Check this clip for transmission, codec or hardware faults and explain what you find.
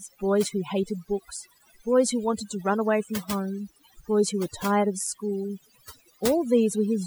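One fault is present, and it runs through the whole speech clip: overdone noise removal. A noise reduction stage set far too aggressively is cutting individual frequency bands down or out wherever they sit close to its noise estimate, and quieter parts of the speech fall under that threshold too. The background drops and breaks up into twinkling specks. Unlike a noise gate, which shuts everything at once, this removes bands selectively.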